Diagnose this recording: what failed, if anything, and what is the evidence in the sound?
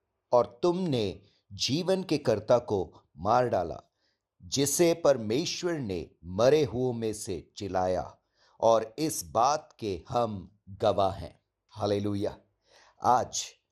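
The speech sounds dull from start to finish, with a gurgling, granular edge as high frequencies flicker in and out. The stage is the codec, likely MP2 compression at about 80 kbps, where upper sub-bands switch off and the remaining bands are coarsely quantised.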